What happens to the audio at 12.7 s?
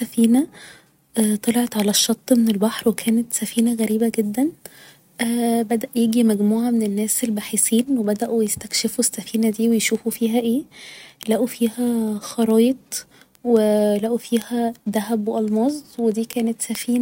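At 12.7 s the speech carries a sharp tick, one of a steady train of clicks repeating about five times a second. They run from 0.18 s to 16.97 s, with uneven strength from tick to tick. These are word clock ticks: the receiving device runs on its own clock, unlocked from the sender's, and the two differ by roughly a hundred parts per million. Each time they slip past each other, a single sample is dropped or repeated.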